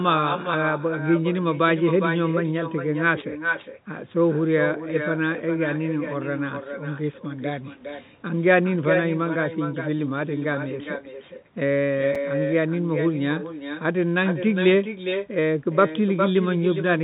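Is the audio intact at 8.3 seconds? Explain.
No. At 8.3 s, as throughout, echo with no canceller returns the speech about 7 dB quieter, roughly 400 ms later: a distinct delayed copy, not smeared room reverb.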